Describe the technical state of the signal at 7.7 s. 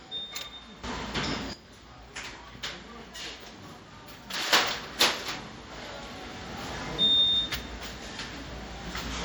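At 7.7 s the level sits inside a sudden gain jump that began at 4.53 s and holds to the end. A digital gain step of about 12 dB, likely applied with no ramp, lifts the sound and its background noise together, loud from that instant onward.

The same moment also carries low-bitrate audio saved at a high bitrate. An earlier heavy MP3 pass, consistent with about 64 kbit/s, likely stripped detail before a much larger re-encode. That second pass cannot restore it, so the first pass's MP3 artefacts remain.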